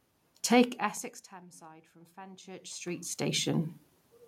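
From 0.41 to 1.45 s the automatic gain control, reacting to a loud input or strong background noise, lowered its gain by about 5 dB, so voice and room noise sink together. From 1.59 to 3.73 s the automatic gain falls the other way, rising by about 8 dB after the input dropped by about 22 dB. The voice and background noise swell together.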